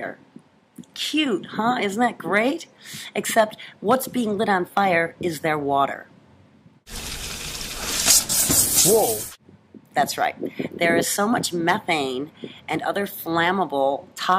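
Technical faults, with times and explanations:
No technical faults can be heard anywhere in the clip. There is nothing to list with a time or an explanation.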